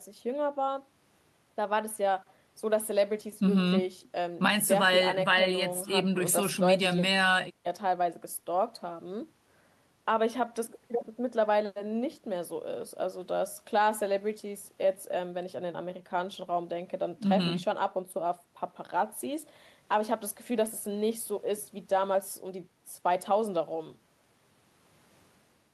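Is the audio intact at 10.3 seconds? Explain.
Yes, at 10.3 seconds the speech plays through cleanly, with no dropout, click, distortion or other audible fault at that moment.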